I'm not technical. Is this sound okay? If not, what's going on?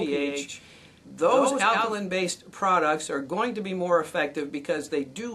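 No. From the very start until about 1.94 seconds, there is a doubled audio track: the same sound is mixed in twice, most likely because it was captured a second time through a slower path or because an edit left two copies out of step. The extra copy trails roughly 0.15 seconds behind and is somewhat quieter, giving an echo-like doubling with no room sound to it. At 1.94 seconds it stops abruptly.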